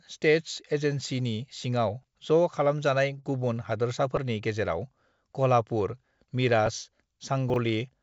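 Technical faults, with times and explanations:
2.03 s and 4.16 s, repeated buffer: audio arrived late, so a piece about 5.3 ms long, fitting a 256-sample buffer, replayed once then twice, giving brief clicky buzzes.
3.20–3.32 s and 3.40–3.44 s, short stall from a late packet: the jitter buffer ran dry, so the last sound was stretched about 29 ms, then 16 ms, holding it with a slight buzz.
7.50–7.56 s, chunks out of order: a 20 ms chunk arrived two chunks late and played after its successors, jumbling the sound with three hard joins.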